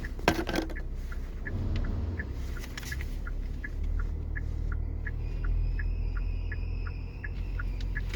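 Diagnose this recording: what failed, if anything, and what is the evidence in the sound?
Codec stage: throughout, the sound is grainy and rough rather than swirly. This is likely Opus compression, music mode, around 24 kbps. The spectrogram shows noise-filled bands without holes, reaching about 20.2 kHz.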